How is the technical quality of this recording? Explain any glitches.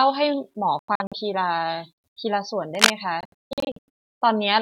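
The recording has three audible faults: two stretches of broken-up speech and one brief scratchy burst.

From 0.79 to 1.13 s and again from 3.21 to 3.89 s, a Bluetooth dropout is the likely cause. Wireless packets arrived too late for playback and were discarded. The speech cuts to silence, then resumes further on as though it had kept playing. The first stretch loses about 0.19 s in several gaps, the longest 93 ms. The second loses about 0.58 s, the longest gap 0.16 s.

From 2.75 to 2.93 s there is cable scratch noise, likely from a worn lead or connector being moved so that its contact resistance jumped rapidly. This lays a dense, ragged rustle over the speech, clearly louder than the speech itself.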